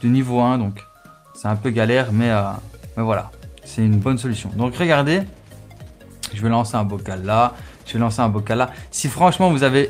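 Nothing here misbehaves; there's no glitch, dropout or other fault anywhere in the audio.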